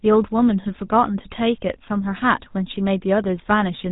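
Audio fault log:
Throughout: GSM full-rate codec. Speech carries a plainly audible buzzy, gravelly roughness, and nothing passes above 3.8 kHz. The codec rebuilds the voice from a vocal-tract filter excited by coarse, regularly spaced pulses, which fits a 13 kbps GSM full-rate stream.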